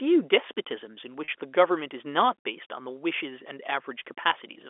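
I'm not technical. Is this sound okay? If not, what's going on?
No. At 1.24 to 1.28 s there is packet loss with pitch repetition. About 40 ms of sound went missing. The last pitch was repeated to fill it, so it sounds briefly held and buzzy.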